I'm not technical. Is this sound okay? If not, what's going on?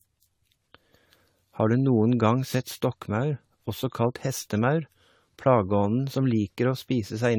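No. From start to finish the speech sounds swirly, smeared and hollow. Sharp starts of sounds are blurred. This is generation loss. The recording was likely compressed and unpacked around seven times, and each round added more damage.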